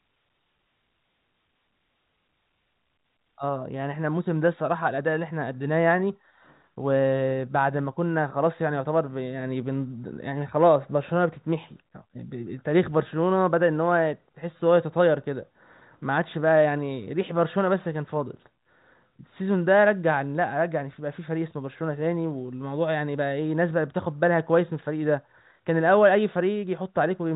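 No faults in the speech; the G.711 telephone coding at 64 kbps is working as intended, with nothing above 3.8 kHz passing.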